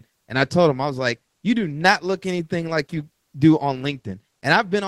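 No technical faults are audible in this speech.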